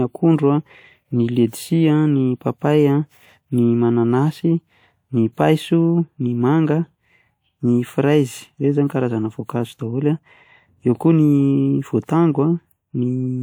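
A speech recording with one pre-echo fault, between 1.48 and 1.53 s. A sharp attack there is preceded by roughly 46 ms of hiss, and the onset itself sounds softened rather than crisp. The transform codec spread its quantisation noise across the whole coding block, so noise scaled for the loud transient also filled the quiet stretch just before it, where nothing masks it.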